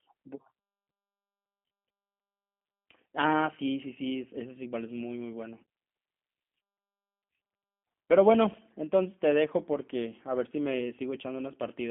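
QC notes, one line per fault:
throughout, G.729 codec: the speech has been squeezed through a low-rate VoIP speech coder, consistent with G.729 at 8 kbit/s, which discards the waveform and rebuilds each short frame from a vocal tract filter, a pitch predictor and a handful of pulses. The band is confined to roughly 200 Hz to 3.4 kHz, so the sound is thin and muffled, and the rebuilt excitation gives it a plainly audible rough, buzzy, synthetic edge.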